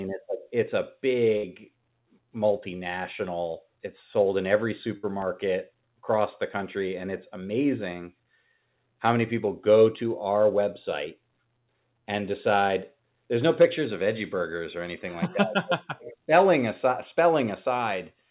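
A burst of packet loss hits twice. Each time, roughly 60 ms of audio never reached the receiver in time, so it extended the last sound and faded it for about 60 ms, and then the speech picked up further on with that stretch gone. It first happens at 1.37 to 1.46 s, right after "it's a", and again at 4.97 to 5.06 s, after "sold in every". Both sound like a brief buzz or hiss followed by a small jump. The whole call is band-limited, with nothing above 4 kHz, which points to narrowband telephone coding.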